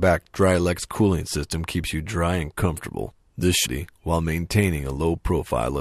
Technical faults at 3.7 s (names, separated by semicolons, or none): stream segment skipped